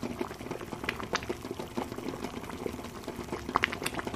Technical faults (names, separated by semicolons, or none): none